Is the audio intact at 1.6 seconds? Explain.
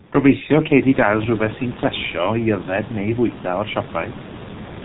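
No. The G.723.1 codec affects the speech throughout, including 1.6 seconds. This telephony coder works in 30 ms frames and squeezes speech into a very low bitrate, and the sound here fits roughly 6 kbit/s with heavy damage. Nothing above 4 kHz survives, and its speech model updates slowly, so the voice at this moment comes through muffled and hoarse, with smeared consonants. The room noise, which rose just before, sits about 16 dB below the speech.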